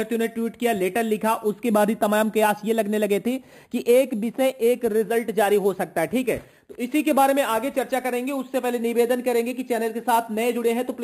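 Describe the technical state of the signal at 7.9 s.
At 7.9 s the signal shows imaging from sample-and-hold upsampling, present across the whole clip rather than at this moment alone. The audio was raised to 48 kHz by holding each sample with no smoothing filter, and the pattern points to an original rate near 11 kHz. Mirror images of the spectrum sit about 19 dB below the signal, the first spanning 5.5 to 11 kHz. They are heard as a bright, metallic fizz whose level follows the sound.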